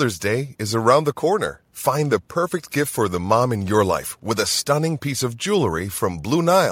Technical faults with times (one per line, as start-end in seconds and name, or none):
none